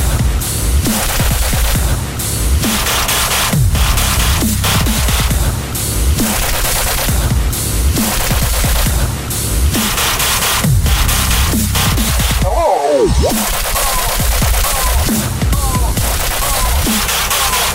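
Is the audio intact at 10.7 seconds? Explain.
Yes, the audio is intact at 10.7 seconds, with no dropout, click, distortion or other fault audible at that moment.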